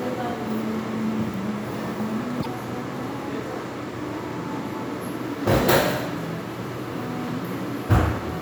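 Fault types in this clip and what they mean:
Broken MP3 bit reservoir: a short glitch from 2.42 to 2.46 s, roughly 44 ms or under two 26 ms frames. The likely cause is a cut in the stream that left the next frames pulling their borrowed reservoir bits from the wrong data.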